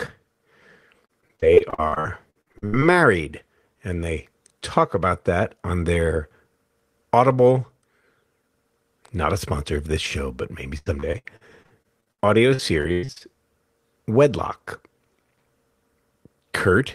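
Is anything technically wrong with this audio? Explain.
Yes. From 1.05 to 2.84 s and 10.78 to 13.22 s, speech turns choppy and robotic, with repeated packet loss: holes up to 102 ms are patched by stretching the preceding sound.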